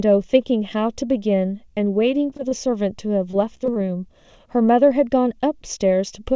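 Throughout the speech, one channel lags the other by a fraction of a millisecond before the mono sum. This channel delay causes comb filtering, with notches from around 1.5 kHz, so the voice sounds hollow and phasey. Its band stops at 8 kHz, which fits a G.722 call codec.

From 2.30 to 2.53 s, repeated packet loss punches short holes of about 20 ms. Each is patched by stretching the previous sound, so the voice turns choppy and robotic.

The same repeated packet loss returns from 3.31 to 3.77 s. Gaps up to 21 ms are concealed again, giving brief, clipped fragments.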